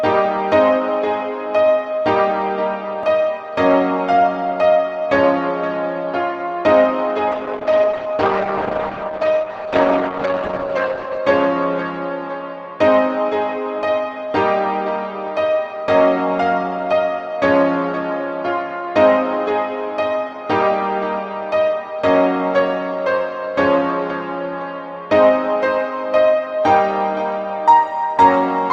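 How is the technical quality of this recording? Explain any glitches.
The recording has one clear glitch. A call bitrate drop runs from 7.33 to 11.25 s: the encoder was starved of bits, which fits a fall from 32 to 9 kbps, so the sound turns coarse and muffled. On a spectrogram the top band shrinks from 12 kHz to 8 kHz.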